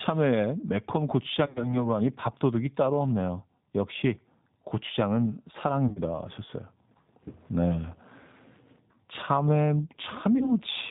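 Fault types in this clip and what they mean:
G.729 codec: The speech is rebuilt from a vocal tract filter, a pitch predictor and sparse pulses, giving a plainly rough, synthetic quality consistent with an 8 kbit/s coder. A spectrogram shows nothing above 4 kHz and grainy, smeared harmonics.
VoIP packet loss concealment by the speech codec: Lost stretches were filled by extending the last pitch and filter at falling gain, heard as a buzzy tone or coloured noise that fades near 1.46–1.86 s, 5.88–5.99 s and 10.38–10.52 s. The waveform shows repetitive, decaying cycles, and the spectrogram shows frozen, flattened harmonics.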